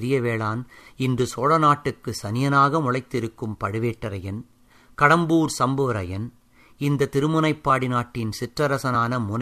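At 8.94 s, compressed frames are skipped: a short run of coded frames never reaches the output, so the speech jumps ahead by about 20 ms. The waveform shows a slight splice, and the spectrogram shows a thin vertical smudge.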